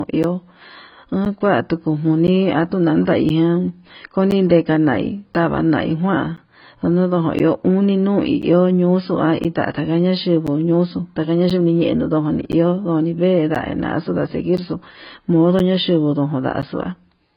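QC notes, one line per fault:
throughout: AAC compression, likely the cause of the dull, smeared speech with a watery, warbling edge on sustained sounds. On a spectrogram everything stops at 5.1 kHz, with patchy holes below, which points to heavy coding at a very low bitrate, around 16 kbps.
0.23 to 16.63 s: periodic USB or driver dropouts. A tick sounds every 1.02 s, around fifteen in all, where roughly 10 ms of audio is replaced by silence. The waveform shows evenly spaced flat gaps, and the spectrogram shows thin vertical blank stripes.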